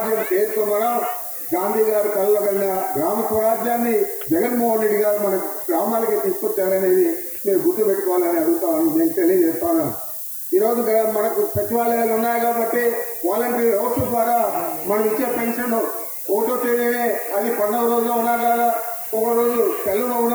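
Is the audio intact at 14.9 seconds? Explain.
No, at 14.9 s you're hearing the low bit depth with noise shaping that runs through the whole clip. The signal's squeezed down to about 5 bits, and the rounding error gets pushed up the spectrum, so there's a steady thin hiss, rising strongly toward the top, sitting only about 10 dB under the sound.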